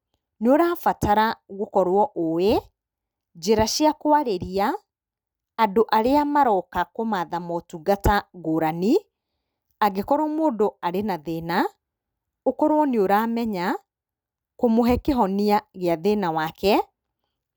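A speech recording with nothing technically wrong to point to at any time.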